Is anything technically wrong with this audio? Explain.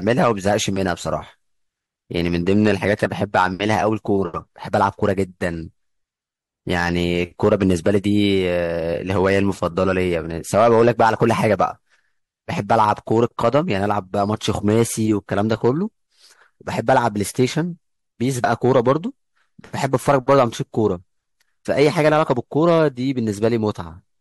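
Yes, there are two faults. The speech is hard clipped throughout, and the audio jumps forward twice at about 3.04 s and 18.44 s.

The hard clipping runs through the whole clip. The signal is pushed about 6 dB past what a stage can pass, so the loudest peaks, under 1% of samples, are sliced flat. The flat tops add high harmonics, heard as crackly grit on loud syllables only. Unlike a limiter, which just lowers the level, it adds fizz.

The compressed frames are skipped at 3.04 s and 18.44 s. Whole coded frames never reach the output, so the audio leaps ahead by roughly a tenth of a second the first time and about 70 ms the second.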